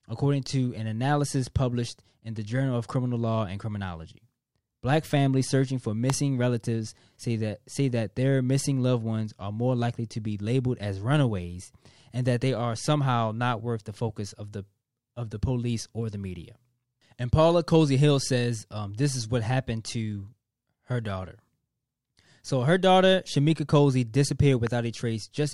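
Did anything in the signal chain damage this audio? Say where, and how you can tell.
Yes. A loud pop strikes at 6.10 to 6.12 s, between "families searching for" and "relatives say that say", about 20 dB above the speech, and a weaker one about 10 dB up at 24.67 to 24.69 s. Each is a single sharp transient over uninterrupted speech, likely a voltage spike in the analogue wiring.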